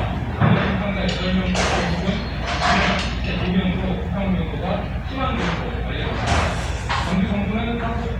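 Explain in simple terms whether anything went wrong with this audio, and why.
Nothing went wrong here: the sounds in this recording come through with no audible technical fault.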